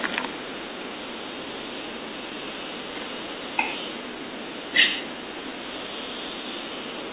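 No technical faults are audible.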